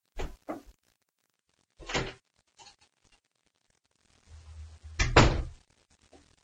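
Adaptive stream at a lower bitrate from 1.35 s to the end: the sound switches suddenly, with no gap, to a lower-quality version of the stream after the connection slowed. Codec artefacts rise audibly from that point, which fits a drop from 96 to 32 kbit/s AAC.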